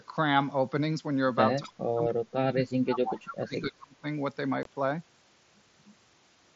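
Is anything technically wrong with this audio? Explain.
Yes, three kinds of fault are audible in this speech.

Speech suppressed in double talk, 1.6 to 4.04 s: the speech sinks repeatedly, by up to roughly 30 dB, for around two seconds in total. The likely cause is an echo canceller that heard both sides at once, mistook the near talker for loudspeaker echo, and attenuated everything.

Echo leak, 1.63 to 1.72 s and 3.31 to 3.35 s: brief, faint copies of the speech arrive 257 ms late, about 20 dB and about 15 dB below it. These are likely far-end loudspeaker pickup that the echo canceller failed to remove before sending it back.

Unconcealed Bluetooth headset packet loss, 4.63 s: a 22.5 ms hole with hard edges cuts into the speech, which fits three lost headset frames. Nothing filled the gap, so it drops out abruptly. The surrounding sound carries the light graininess of the mSBC headset link.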